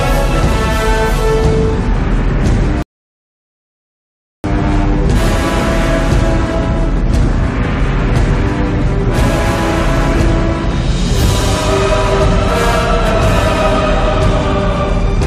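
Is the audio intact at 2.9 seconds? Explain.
No. At 2.9 seconds the audio sits inside a rebuffering stall from 2.82 to 4.44 s. The player ran out of downloaded data and paused. The sound drops to silence, then resumes exactly where it stopped. Nothing is lost, but about 1.6 s is added.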